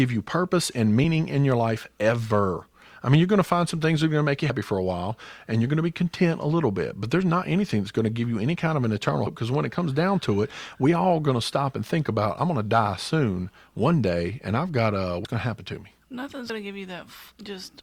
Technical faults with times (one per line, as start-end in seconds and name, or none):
15.25 compressed frames skipped
16.49 compressed frames skipped